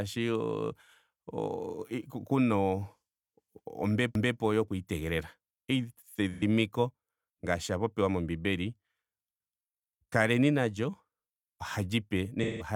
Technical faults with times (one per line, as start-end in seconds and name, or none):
4.15-4.40 overlapping chunks
6.33-6.43 AAC frame loss with concealment
12.43-12.66 AAC frame loss with concealment